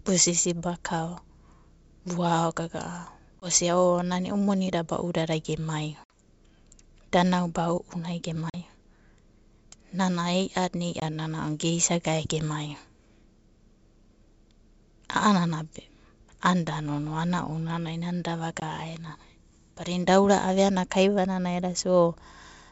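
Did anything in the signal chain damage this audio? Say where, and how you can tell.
Yes, at the network stage: packet loss on an ADPCM call. Hard-edged silent holes fall at 3.40, 6.04, 8.50, 11.00 and 18.60 s, lasting 20, 60, 40, 20 and 20 ms. A spectrogram shows blank vertical bands. Afterwards the waveform resumes slightly distorted while the decoder's predictor and step size resynchronise.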